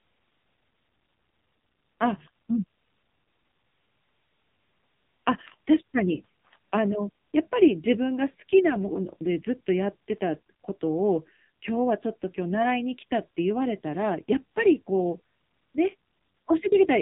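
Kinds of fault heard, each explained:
AMR narrowband mobile codec: The speech has been squeezed through the 2G/3G mobile speech codec, which samples at 8 kHz and rebuilds each 20 ms frame from a vocal-tract model driven by a handful of pulses. Here the content stops dead at about 3.8 kHz, leaving a thin, boxed-in telephone tone, and the damage is heavy. The buzzy, synthetic edge on the voice points to one of the low-rate modes, around 5.9 kbps.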